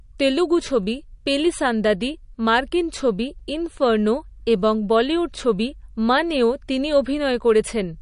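Throughout, the speech sounds watery and swirly with nothing above 10.6 kHz, likely from MP3 compression at around 40 kbps; unlike a plain low-pass, weak detail flickers frame to frame.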